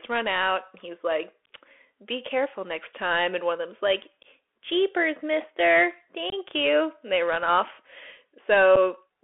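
From the start, the whole clip runs through a Bluetooth CVSD headset codec. The speech is squeezed into a phone-style band of roughly 300 Hz to 3.4 kHz, and the coder's one-bit up-or-down steps can't keep pace with fast, loud high content. Sibilants come out gritty, peaks smear into distortion, and a grainy hiss sits under everything. The damage is plainly audible, and it fits a 64 kbps CVSD link.

At 6.30 to 6.34 s there's unconcealed Bluetooth headset packet loss. About three packets, around 22.5 ms of audio, went missing between headset and phone, and nothing was patched in. You hear a brief hard-edged hole, and the speech resumes a touch quieter. A second, shorter drop at 8.76 s loses about a single packet, roughly 7.5 ms, and leaves a very short hard-edged hole in the speech.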